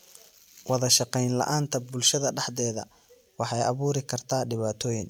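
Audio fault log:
Nothing to log here, as no faults turn up anywhere in this speech.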